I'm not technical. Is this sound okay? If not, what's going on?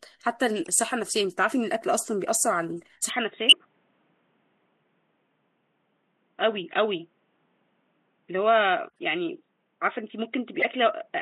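No. From 3.10 s to the end, everything above about 3.8 kHz is gone, so the speech turns dull and boxy with no gap and no jump in loudness. This is likely an input switched to a poorer device, such as a headset's call mode.

There are also four short glitches from corrupt frame decoded: damaged chunks of compressed audio played anyway, giving brief chirps or noise bursts at 0.63 s, 3.49 s, 8.89 s and 10.60 s. The one at 3.49 s is loud. The one at 8.89 s is faint.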